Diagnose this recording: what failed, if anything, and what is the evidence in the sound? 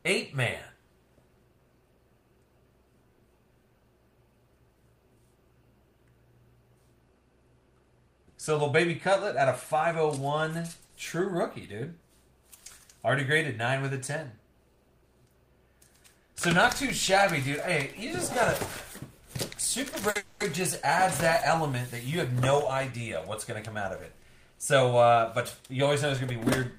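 Network stage, short stalls from late packets at 10.85, 19.89 and 20.10 s: sound held 30 to 50 ms, nothing lost, unlike dropouts that skip material.

A call audio freeze follows at 20.17–20.42 s, about 230 ms of fading continuation without silence, likely from delayed packets draining the jitter buffer. It runs longer than the stalls.

A jitter buffer speed-up runs at 22.28–22.92 s and 24.55–26.61 s: audio plays about 5% fast with pitch unchanged, trimming about 40 ms and 100 ms, not resampling.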